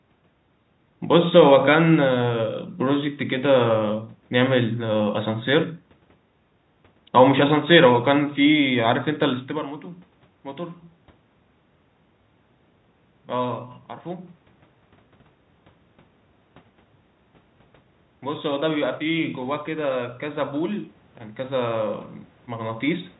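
A speech recording in which, from 18.22 s to 23.13 s, the voice and the room noise behind it swell together by about 7 dB. This is automatic gain rising: the automatic gain control judged the input too quiet and slowly raised its gain, lifting everything at once rather than the voice alone. The level change around 9.5 s is the talker moving relative to the microphone, not a system fault.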